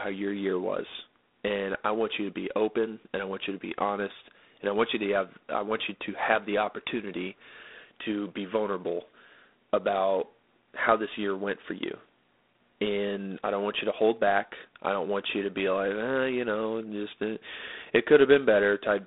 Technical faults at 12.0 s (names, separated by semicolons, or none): G.726 ADPCM